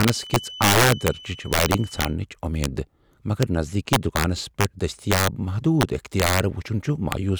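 From the start of the clip to 2.18 s, a feedback whistle sits behind the speech: a thin, steady tone at 3 kHz, around 20 dB below the speech level, swelling and fading slowly in loudness. The likely cause is a loudspeaker-to-microphone loop held just at the edge of feedback, so one frequency keeps ringing without building up. It stops at 2.18 s.

Integer overflow runs through the whole recording. The signal is driven about 8 dB past the integer ceiling, and instead of being limited, samples that exceed it wrap around to the opposite extreme of the range. Well under one percent of samples are affected, but each one jumps full-scale, so the loudest speech peaks produce violent, sharp cracks that sound far harsher than ordinary clipping.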